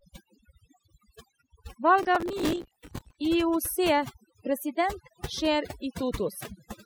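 A speech recording with overdone noise removal throughout. The noise reduction is set so aggressively that frequency bands sitting near its noise estimate are pulled almost to zero, and the quieter parts of the voice are taken out with them. The background drops to near silence flecked with small twinkling artefacts. From 2.03 to 3.16 s, processor overload crackle rides over the speech as a gritty, tearing burst. The processor is falling behind on its audio buffers, repeatedly missing the deadline for small blocks. The texture of the crackle points to buffers of around 5 ms. With dozens of misses over the stretch, perhaps on the order of seventy, each missed slot is filled with a stale piece of earlier audio whose hard edges click against the surrounding sound. The crackle stops once the load eases.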